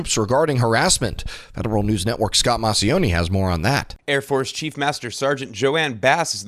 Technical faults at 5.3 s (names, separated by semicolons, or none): none